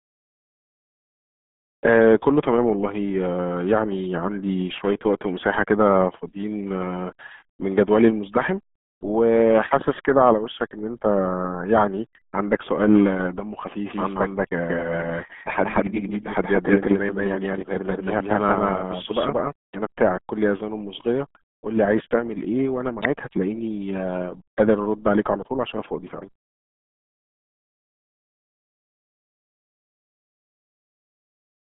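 From the first second to the last, the speech carries the heavy damage of the RealAudio 14.4 codec. Everything sounds squeezed into a narrow phone-line band of about 150 Hz to 3.5 kHz, with nothing at all above 3.8 kHz. Consonants lose their edge, and vowels go muffled and gargly. That's what you'd expect from an 8 kbit/s dial-up-era stream throwing away most of the signal.

From 13.86 to 19.52 s, a doubled audio track appears. A second full-band copy of the same speech runs about a fifth of a second behind, at roughly the same level as the original. It's dry, with no tail or room colour, and it cuts in and out abruptly at both ends. That points to a likely cause of the signal being captured twice, once through a slower path.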